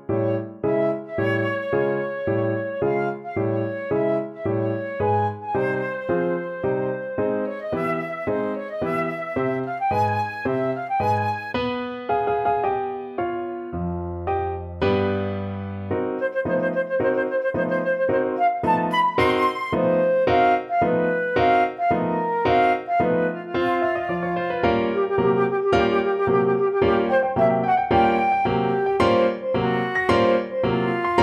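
No technical faults are audible.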